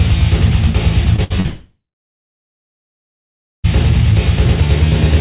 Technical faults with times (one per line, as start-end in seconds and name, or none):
1.16-1.46 short concealed packet loss
1.24-1.32 burst of packet loss
1.46-3.66 long network dropout